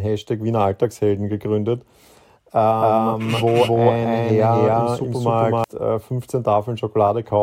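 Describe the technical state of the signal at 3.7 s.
At 3.7 s the speech is affected by a doubled audio track, running from 2.80 s to 5.64 s. A second, full-band copy of the same speech sits roughly 300 ms behind the original at about equal loudness, with no decay or room colouring, so every syllable is repeated as a distinct, dry echo. The likely cause is the signal being captured again through a slower path, or an edit leaving two misaligned copies; the copy starts and stops abruptly at the span edges.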